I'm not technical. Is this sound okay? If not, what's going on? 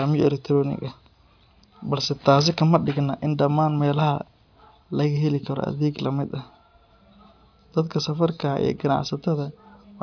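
Yes, it sounds fine, and there's nothing wrong here to worry about.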